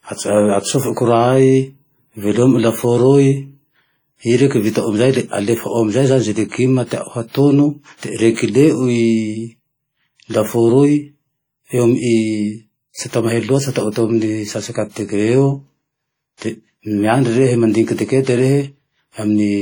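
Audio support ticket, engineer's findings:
Heavy transform-codec damage across the whole speech recording, start to end. Probable component: a WMA encoder, likely at a low rate; the degree of smearing fits around 32 kbps. Long-block quantisation noise smears tens of milliseconds around each syllable. Ringing, washy texture. Hiss breathes with the level. Weak spectral lines dropped. Band extends to 20.1 kHz, so the damage is not a bandwidth cut.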